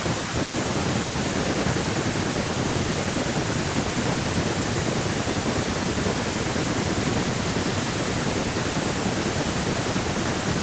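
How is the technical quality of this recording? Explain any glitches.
There aren't any glitches to explain: the speech comes through intact, with the thin low end and the top stopping around 8 kHz being just what a call's microphone processing normally leaves behind.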